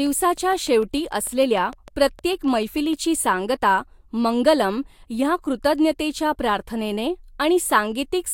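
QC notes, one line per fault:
0.07–2.94 s: train of clicks. Regular ticks at 6.6 per second, around twenty in all, each much the same shape and roughly as loud as the speech. They stop just before "सांगता मंगलम् ह्या कृतज्ञतेच्या". The cause is likely interference or a faulty connection injecting repeated pulses.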